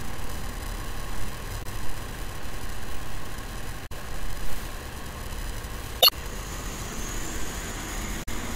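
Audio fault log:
1.60–1.66 s, 3.83–3.91 s, 5.99–6.13 s, 8.22–8.28 s: damaged data in a compressed stream. Corrupted bytes make the decoder lose sync, so each spot is briefly disrupted.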